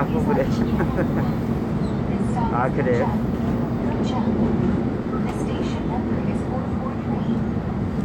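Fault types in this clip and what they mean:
Damaged data in a compressed stream: Part of the coded data arrives corrupted, so the decoder misreads those frames and loses sync until it finds the next frame header. Here it sounds as a short blip from 0.33 to 0.37 s, about 40 ms long.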